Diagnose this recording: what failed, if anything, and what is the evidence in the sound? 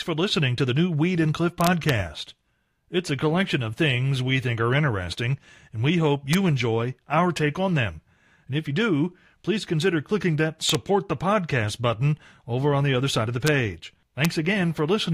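Integer overflow in a fixed-point gain or sample-format conversion stage. Loud speech peaks crack violently at 1.61 to 1.89 s, 6.33 s, 10.70 to 10.75 s, 13.47 s and 14.25 s. The peaks go only about 1 dB past full scale, about 2 dB at 14.25 s. Instead of being limited, each excess sample wraps to the opposite extreme. That full-range jump makes a harsh crack, much sharper than clipping.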